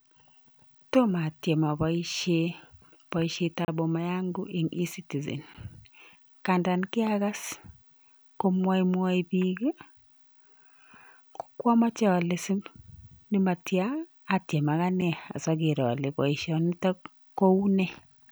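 At 3.65 to 3.68 s, 5.54 s and 15.01 s, blocks of digital silence cut the speech out and back abruptly. They are dropouts of about 32, 11 and 6 ms, likely where the output buffer went unfilled. The 11 ms gap fits a 512-sample buffer. The two shorter gaps, under 15 ms, are heard as a tick or dip, and the longest gap is heard as a brief hole.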